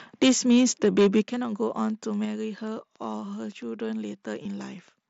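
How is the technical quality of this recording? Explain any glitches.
The recording has several clear glitches.

From 0.22 to 1.2 s the peaks clip, about 6 dB over the limit. This is likely microphone overload, which flattens the tops and adds a harsh crackle.

At 0.23 s, 1.23 s and 2.25 s the level drops abruptly, by about 4, 8 and 3 dB. The likely cause is the microphone volume being stepped down automatically.

At 1.41 s and around 4.43 to 4.45 s there are brief buzzy fills of about 15 and 22 ms. This is concealed Bluetooth headset packet loss, with the gap filled from recent waveform.

From 1.9 to 4.9 s a train of clicks ticks at about five per second, unevenly, roughly as loud as the sound. Interference is the likely source.

The mSBC headset codec adds a light graininess and limits the top end to 8 kHz.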